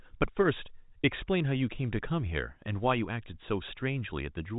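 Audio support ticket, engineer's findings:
No faults found; speech arrives over a working G.711 telephone path, band-limited with nothing above about 3.8 kHz, as expected for that coding.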